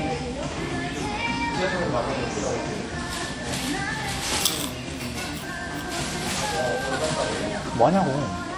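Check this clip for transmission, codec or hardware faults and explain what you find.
One fault is present throughout the clip. From start to end there is plainly audible WMA compression, likely from a low-bitrate encode around 48 kbps. Long transform blocks smear quantisation noise, producing ringing, washy hiss; a spectrogram shows smeared, blotchy energy with nothing above 20.1 kHz.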